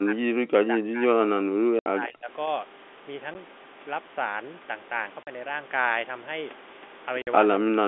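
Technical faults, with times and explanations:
0.0–2.3 s, speech suppressed in double talk: the voice sinks by as much as about 40 dB in pieces over roughly two seconds, likely the echo canceller turning down both sides together.
1.79 s, 3.34 s, 5.23 s and 7.22 s, packet loss filled with silence: dead gaps of 70, 10, 40 and 50 ms with hard edges, all multiples of a 10 ms packet, unlike soft suppression dips.
7.6 s to the end, speech suppressed in double talk: the voice dips by about 25 dB for roughly 0.3 s, likely the same echo-canceller cut.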